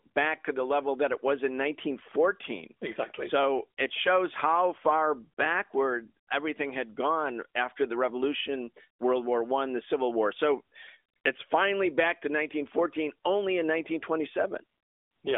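No technical faults are present.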